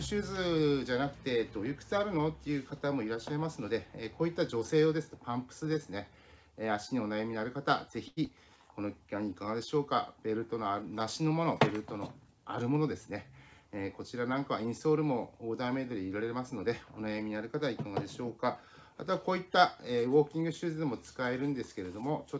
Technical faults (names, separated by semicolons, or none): short stall from a late packet; skip ahead; jitter buffer slow-down; jitter buffer speed-up